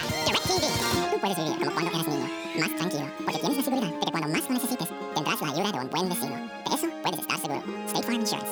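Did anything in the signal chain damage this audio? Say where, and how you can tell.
Yes. The damage sits at the sample-format stage, where the audio was read two samples at a time, producing double speed across the whole clip. The reader took each pair of samples as one frame, likely because it assumed two channels or a wider sample word, so everything plays at 2x speed and 12 semitones (one octave) high. On a spectrogram every feature is time-compressed and doubled in frequency.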